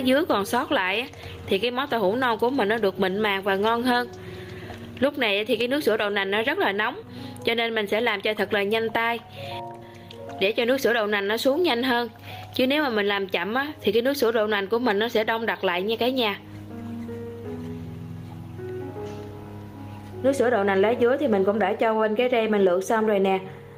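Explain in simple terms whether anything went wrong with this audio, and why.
The input level was most likely set far too high, so an automatic limiter keeps yanking the volume down on every loud moment. That causes gain pumping throughout, leaving everything squashed.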